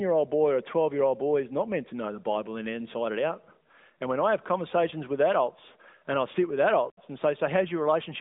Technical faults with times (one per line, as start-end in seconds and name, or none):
none